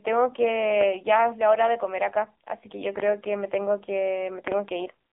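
From start to finish the speech carries the AMR narrowband mobile codec, the 2G/3G phone codec. The band runs roughly from 250 Hz to 3.6 kHz, with nothing at all above 3.7 kHz, so sibilants and breath detail are gone. The codec rebuilds the voice from a vocal-tract model excited by a handful of pulses per subframe, and the damage here is heavy: a buzzy, synthetic timbre that fits a low rate near 6.7 kbps.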